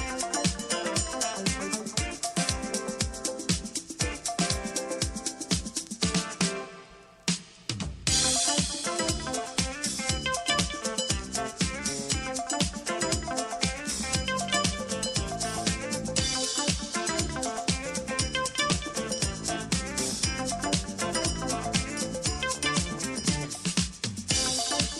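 No technical faults can be heard anywhere in the clip. Nothing interrupts or alters the audio at any point.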